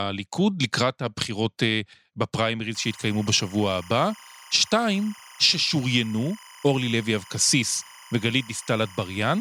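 A steady chirping warble sits behind the speech from 2.75 s to the end, alternating between pitches near 1 kHz and 2 kHz at about 25 dB below the voice. This is timecode bleed: 25 frames-per-second linear timecode leaking in from an adjacent track or cable.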